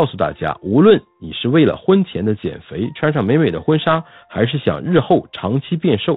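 No technical faults can be heard anywhere in this recording.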